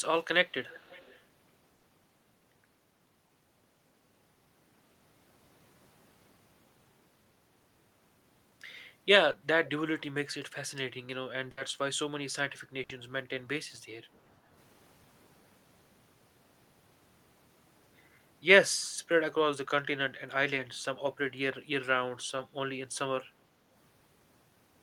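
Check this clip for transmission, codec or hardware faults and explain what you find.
The clip has three kinds of fault: an echo leak, bursts of packet loss and short concealed packet losses.

At 0.13 to 0.25 s and 0.68 to 1.23 s, a faint delayed copy of the speech trails it by about 0.45 s. The first is very quiet, the second clearer. The likely cause is a far-end echo canceller letting loudspeaker sound back through.

Bursts of packet loss hit at 1.75 to 1.85 s, 11.51 to 11.59 s and 12.83 to 12.91 s. The receiver stretched the last sound, fading it, over 80, 60 and 60 ms. The speech then jumps ahead with those stretches missing.

Short concealed packet losses fall at 3.27 to 3.31 s, 9.31 to 9.35 s, 20.55 to 20.59 s and 22.37 to 22.41 s. Each fills 20 ms of missing audio, heard as a brief smear or wobble.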